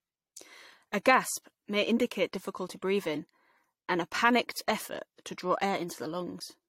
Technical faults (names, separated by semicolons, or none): generation loss